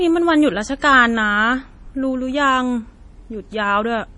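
Throughout the speech, likely MP3 compression starved of bits, fitting a 32 kbps stream, has cut everything above 10.6 kHz and dropped weak frequency detail frame by frame. The result is a heavy watery swirl, chirpy s sounds and smeared consonant attacks.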